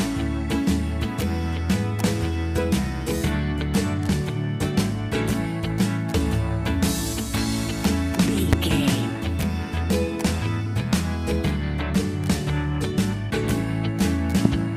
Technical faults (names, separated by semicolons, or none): loud pop